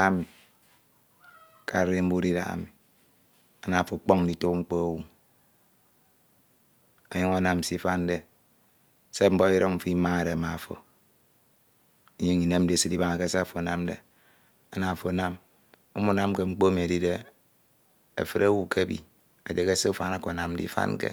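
Nothing in the speech recording stood out as a technical fault on listening.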